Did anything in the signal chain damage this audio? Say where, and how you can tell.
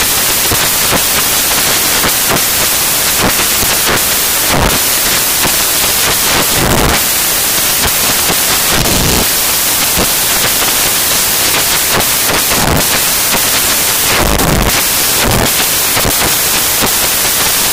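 Yes. From start to finish the audio is loud, harsh broadband noise. That points to sample-format conversion: samples built from the wrong bytes, so the fast-changing low bits land in the most significant position.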